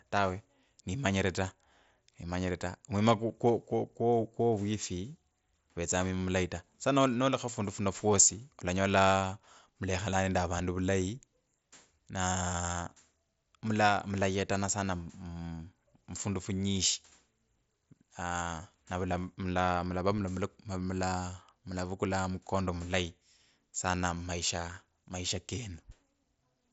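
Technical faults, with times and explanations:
Nothing here counts as a technical fault; the speech comes through a Bluetooth mSBC headset link, with its top end stopping at about 7.7 kHz, which is simply how that wideband headset codec carries sound.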